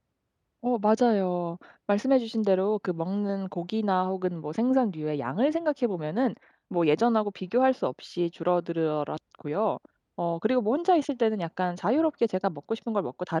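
No technical faults can be heard anywhere in this speech recording, so there is nothing to describe in time order.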